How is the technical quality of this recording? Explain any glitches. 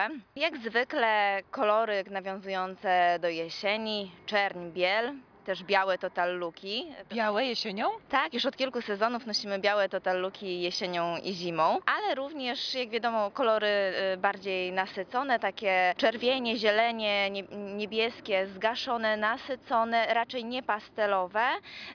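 No glitches or faults heard.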